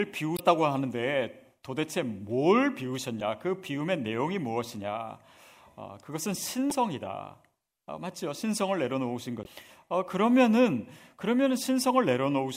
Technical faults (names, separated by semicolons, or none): damaged data in a compressed stream